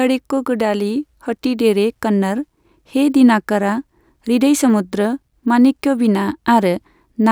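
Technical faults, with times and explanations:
Throughout, resampler restarted on every block: each 20 ms block is converted from 48 kHz to 44.1 kHz alone, so errors at every block edge make a 50 Hz buzz, seen as evenly spaced vertical lines on a spectrogram.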